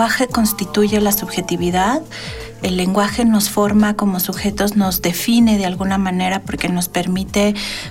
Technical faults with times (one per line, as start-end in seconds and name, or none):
none